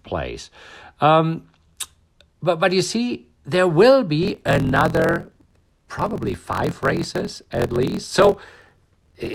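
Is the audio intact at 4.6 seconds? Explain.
No. From 4.21 s to the end of the clip, the speech carries a steady 43.1 Hz buzz and runs about 1.12 times fast at near-normal pitch. This is a block size mismatch (truncated): each block's tail is discarded, which fits a 1024-sample read.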